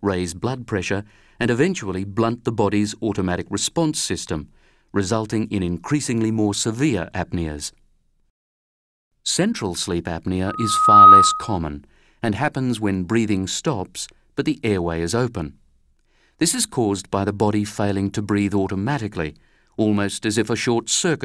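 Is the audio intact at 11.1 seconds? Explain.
No. At 11.1 seconds a loudspeaker feedback squeal is sounding: a single piercing tone at 1.2 kHz that swells over roughly half a second and sits far above the rest of the audio, around 15 dB louder. It runs from 10.47 to 11.57 s. A microphone is picking up the loudspeaker it feeds, and at 1.2 kHz the loop gain exceeds one, so that frequency keeps amplifying itself until the loop is broken.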